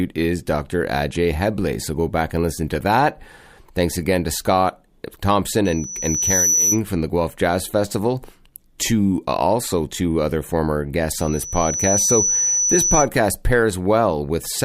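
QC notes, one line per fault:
5.65–6.81 s and 11.14–13.09 s, loudspeaker feedback squeal: A single tone at 5.9 kHz swells from nothing over roughly 0.7 s until it sits about 5 dB above the speech. The first squeal stops just before "from the", and the second rises just after "also two other former". The microphone is picking up its own loudspeaker, and at that frequency the loop gain exceeds one, so the tone feeds itself. The steady build-up at one fixed pitch, repeated identically, separates it from a constant interference whistle.
8.78 s, pre-echo: A 13 ms wash of hiss, about 16 dB above the surrounding floor, arrives just ahead of a sharp attack, and the attack itself sounds softened. The coding noise meant for the loud onset has been spread back across the quiet moment before it, which fits a transform block of about 26 ms with no switch to short blocks. Because the noise comes before the transient and not after it, this is not a click or a post-echo.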